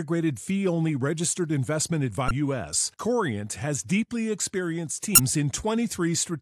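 At 2.28 to 2.31 s and again at 5.15 to 5.18 s, the speech breaks into a brief glitch lasting about 34 ms, the sign of damaged data in a compressed stream. Corrupted bytes there leave the decoder misreading frames and losing sync until it finds a valid header. On a spectrogram each event shows as a narrow vertical disruption that ignores the speech's harmonic pattern. The waveform shows a short, abrupt discontinuity.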